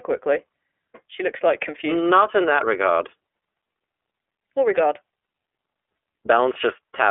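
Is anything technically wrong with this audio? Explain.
Yes. The speech runs through the iLBC codec for its whole length, and the damage is plainly audible. Everything sits inside a telephone band of roughly 300 Hz to 3.4 kHz, so it sounds thin and boxy. Each frame's excitation is coded independently, leaving a rough, slightly synthetic buzz that fits 30 ms frames at about 13 kbps. On a spectrogram the energy stops sharply at 3.4 kHz, with blocky texture at frame spacing.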